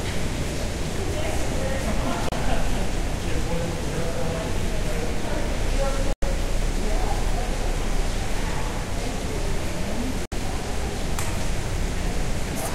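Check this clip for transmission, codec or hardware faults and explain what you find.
Three brief silences break the sound, at 2.29–2.32 s, 6.13–6.23 s and 10.26–10.32 s, lasting about 32, 96 and 64 ms. This is digital broadcast dropout: corrupted frames failed their checks, so the receiver muted until valid ones returned. The gap lengths fit one, three and two 32 ms frames, and their content is lost.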